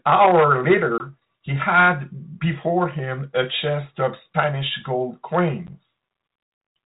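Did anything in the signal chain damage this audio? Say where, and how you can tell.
Yes. Hard-edged holes at 0.98 s (20 ms) and 5.67 s (10 ms), then a slightly distorted return, show network packet loss on an ADPCM call desynchronising the decoder's predictor.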